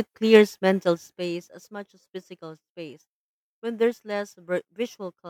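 Zipper noise runs from 0.7 to 1.72 s, while the level of the speech drops by about 15 dB. Instead of gliding down, the gain moves in discrete jumps, roughly fifty times a second, with no smoothing between them. Each jump puts a tiny discontinuity in the waveform, so the fade carries a fast ticking, zipping texture on top of the speech until the level settles.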